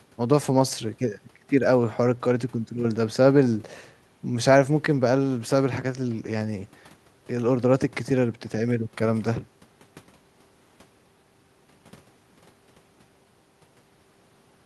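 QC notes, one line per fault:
No technical faults can be heard in the speech signal, which holds steady and intact across the whole recording.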